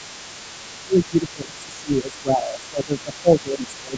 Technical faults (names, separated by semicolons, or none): other side's voice leaking through; speech suppressed in double talk